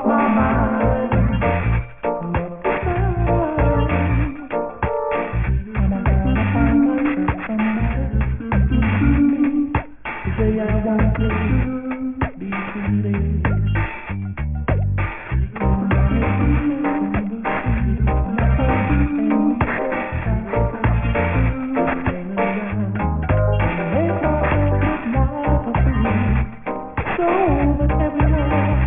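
Aliasing runs through the whole clip. Content above about 3 kHz folds back below that edge, which points to a downsample to 6 kHz without an anti-alias filter. The mirrored components sit roughly 15 dB under the signal, giving a gritty, metallic haze that fills the band right up to its ceiling.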